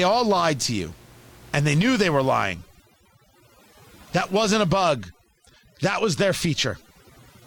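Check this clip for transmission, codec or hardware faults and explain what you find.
One fault is present: overdone noise removal, running from 2.44 s, just after "they were", to the end of the clip. Before that point, room noise sits about 26 dB below the speech. Afterward, an over-aggressive noise suppressor pulls individual frequency bands down whenever they approach its noise estimate, taking soft speech detail with them. The background drops and breaks up into twinkling specks. Unlike a noise gate, which mutes everything at once, this removes bands selectively.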